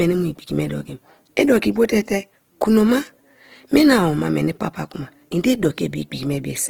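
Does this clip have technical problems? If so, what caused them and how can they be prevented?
Yes. Throughout, the speech sounds rough and grainy, with plainly audible Opus compression, likely from its music mode at a bitrate near 16 kbps. Band energies are preserved to about 20.2 kHz, but starved bands are filled with folded or noise-like content. Encoding at a higher bitrate prevents this.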